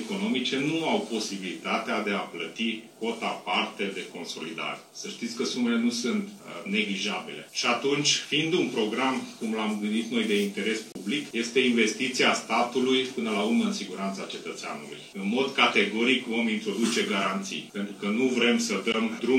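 Bluetooth dropouts at 10.92–10.95 s and 18.92 s cut the audio to silence for about 29 ms and 15 ms, likely from wireless packets arriving too late and being discarded.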